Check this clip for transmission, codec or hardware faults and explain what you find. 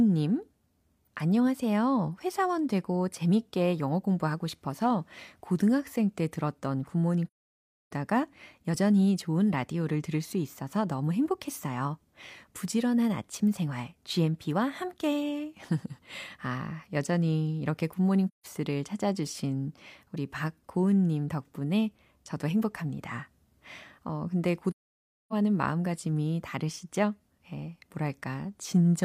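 Three dropouts from AAC frame loss with muting. They occur at 7.27 to 7.91 s (0.64 s), 18.28 to 18.46 s (0.17 s) and 24.72 to 25.33 s (0.6 s). Lost frames were decoded as silence. The overlapping windows fade the speech out and back in, leaving soft-edged gaps. The longest gap fits roughly fifteen lost frames.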